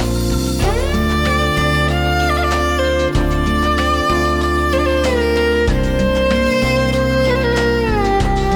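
No technical faults are audible.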